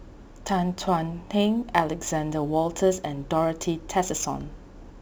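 Speech throughout carries crude rate conversion: a gritty, inharmonic fizz that tracks the louder and brighter passages. The pattern fits a 48 kHz to 44.1 kHz change made by dropping samples without filtering, leaving error tones roughly 25 dB below the speech.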